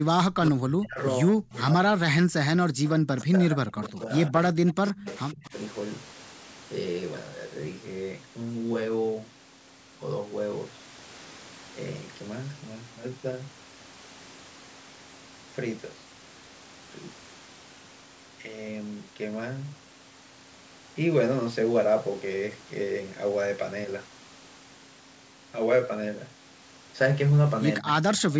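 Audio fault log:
0.0–2.92 s, 3.25–5.53 s and 27.80–27.87 s: speech suppressed in double talk. The talker's level sinks sharply while the far side is also active, dropping by up to about 40 dB in the first stretch, about 30 dB in the second and about 15 dB in the brief late dip, with roughly two seconds then one and a half seconds of speech affected. This likely comes from the echo canceller failing to tell near speech from loudspeaker echo during overlap and attenuating both.
2.85–3.25 s, 3.84–3.88 s, 4.86–5.12 s and 27.76–28.21 s: echo leak. A faint delayed copy of the sound trails the original by 114 ms, sitting about 20 to 25 dB below the main speech and arriving in short scraps rather than a continuous tail. This is likely residual loudspeaker pickup that the far end's echo canceller did not fully remove, so part of it was returned down the line.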